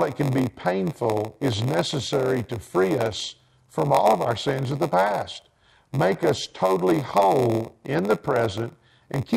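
Speech, with a block size mismatch (padded) running through the whole clip. A steady buzz at about 93.8 Hz sits under the speech, and delivery is stretched to 0.938 of normal speed while timbre stays unchanged. That pattern means each block reaching the reading stage is a little short and its tail is filled with silence. The repeated gap produces the buzz at the block rate, and the buzz frequency fits a 512-sample read block.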